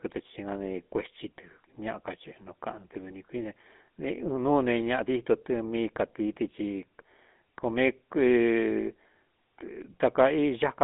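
From start to finish the speech has passed through the GSM full-rate codec, which models the vocal tract and drives it with a sparse, regularly spaced pulse excitation, consistent with a 13 kbps coding rate. The result is plainly audible: a buzzy, gravelly roughness rides on the voice. The line band runs from roughly 200 Hz to 3.5 kHz, with nothing above 3.8 kHz, so the sound is thin and boxy, lacking low body and crisp consonant detail.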